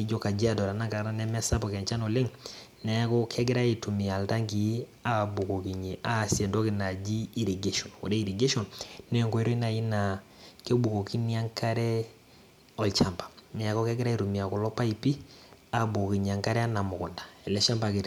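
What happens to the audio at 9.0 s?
Nothing goes wrong at 9.0 s; the speech runs through that moment intact, with no dropout, click, distortion or other audible fault.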